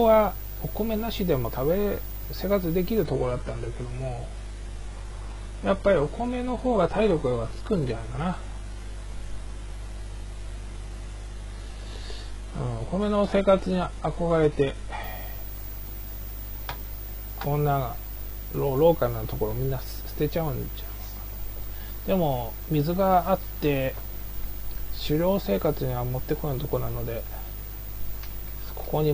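Between 3.04 and 15.04 s the sound abruptly drops in quality: the adaptive stream switched to a lower bitrate, with the treble cut off and more codec artefacts, pointing to a very low-rate HE-AAC rendition. A spectrogram shows a sharp ceiling near 11.4 kHz, while the waveform stays continuous with no gap.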